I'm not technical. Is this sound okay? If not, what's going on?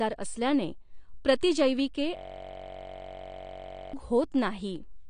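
No. From 2.17 to 3.93 s, right after "असल्याने प्रतिजैविके", a system hang loop repeats one 21 ms scrap about 47 times a second, making a steady buzz.

Throughout, the speech sounds dull and smeared, with nothing above 9.6 kHz, likely from heavy AAC compression discarding detail to save space.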